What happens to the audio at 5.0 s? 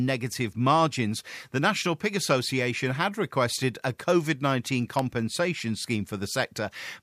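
Right at 4.99 s there's an electrical switching spike: a single sharp snap laid over the speech, peaking at around -15 dBFS. It's most likely a nearby switch, motor or static discharge arcing briefly, with the audio line picking up that burst of interference.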